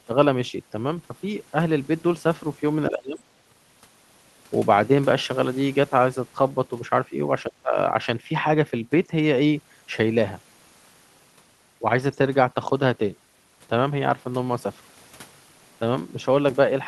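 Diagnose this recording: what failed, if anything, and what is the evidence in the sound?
Call processing failed: speech suppressed in double talk. The level sinks by about 30 dB from 2.9 to 3.23 s and about 20 dB from 7.48 to 7.77 s, likely the echo canceller ducking the talker during far-end speech. The gain dips and recovers, unlike packet-loss gaps or clicks.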